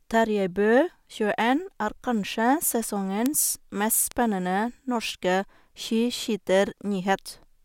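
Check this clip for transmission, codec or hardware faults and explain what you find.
Three bit error spikes, at 3.26, 4.12 and 5.09 s. A flipped bit makes one to three samples jump by a power of two and snap back, heard as a sharp tick. On the waveform each is a lone needle, about -3 dBFS then about -16 dBFS, and on the spectrogram a thin full-band vertical line.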